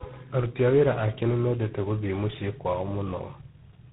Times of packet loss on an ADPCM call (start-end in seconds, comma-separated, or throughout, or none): none